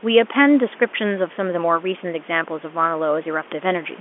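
The speech arrives as ordinary G.711 A-law telephone audio, confined to a line band of roughly 250 Hz to 3.4 kHz with nothing above about 3.7 kHz, and the room's background noise sits about 24 dB below the speech, with no technical fault to report.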